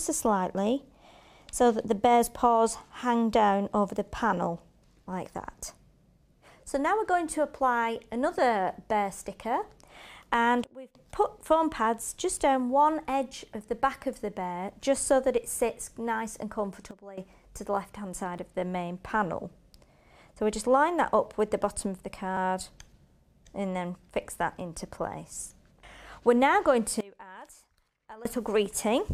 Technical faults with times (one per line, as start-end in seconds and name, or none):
8.38 overlap between stream segments
10.64-10.95 sudden gain jump
12.37 overlap between stream segments
16.91-17.18 sudden gain jump
18.38 overlap between stream segments
22.37 overlap between stream segments
27.01-28.25 sudden gain jump